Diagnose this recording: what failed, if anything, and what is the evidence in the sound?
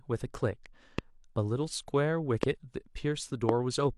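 Likely voltage steps in the analogue wiring inject single loud pops at 0.99–1.01, 2.43–2.45 and 3.49–3.51 s, about 15–20 dB above the continuing speech.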